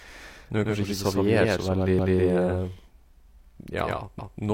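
A doubled audio track runs through the whole recording: the speech is heard twice, with a second full-band copy trailing the first by roughly a tenth of a second at about the same level. The trailing copy carries no reverberant tail or room colouring, so it sounds like a hard slapback echo rather than a space. The likely cause is the signal reaching the mix a second time through a slower path, or an edit that left two copies out of alignment.

Overlapping chunks appear from 1.99 to 2.19 s and again from 4.19 to 4.39 s. At each point, 200 ms of audio plays a second time, producing an audible stutter at the seam. The two events fall 2.2 seconds apart, which matches audio handled in blocks of about 2 s where each new block began 200 ms before the previous one had finished.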